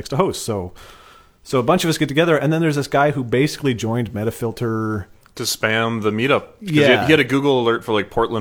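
No technical faults can be heard anywhere in the recording. The speech carries on from beginning to end with nothing in the signal that stands out as a problem.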